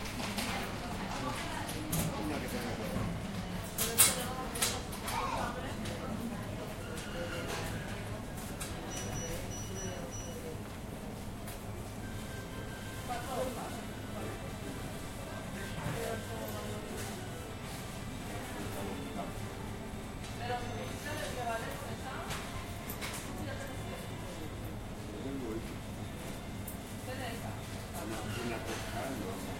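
No technical faults can be heard anywhere in the recording, and the signal stays steady and intact throughout.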